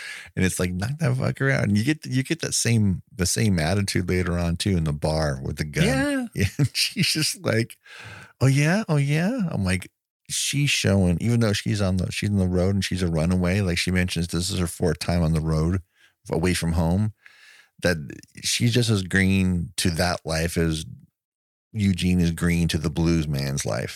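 Across the whole recording, the speech signal holds steady and continuous, with no technical fault to be heard.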